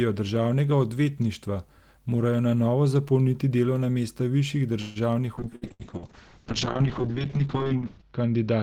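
At 4.81 s, right after "zapolniti delovna mesta višjih", the speech stops moving forward for about 0.17 s. The last sound is stretched into a short fading buzz or hiss, about 142 ms of filled-in audio, and the speech then resumes exactly where it left off, with nothing skipped. That is the signature of a call audio freeze, likely caused by packets stalling in transit until the jitter buffer ran dry. The receiver had to improvise audio while it waited. The result is a pause inserted into the speech, not a loss of content.

From 5.42 s to the end of the clip there is a call bitrate drop. The encoder's rate falls from 32 kbps to 6 kbps and stays at the floor for about 2.6 s. At that rate the coded bandwidth shrinks from 20 kHz to 8 kHz, so the top end of the speech disappears. What remains sounds muffled, with a rough, watery texture from the much coarser coding. It does not recover before the clip ends.

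Inside that low-rate stretch there are two bursts of packet loss, at 5.56 to 5.64 s and 5.73 to 5.82 s. Each drops about 60 ms of audio. The receiver bridges each hole with a brief concealment sound that fades out. The speech then picks up further along, so a short piece is cut out each time. Coming about 0.1 s apart, the two gaps give that moment a stuttering, chopped quality.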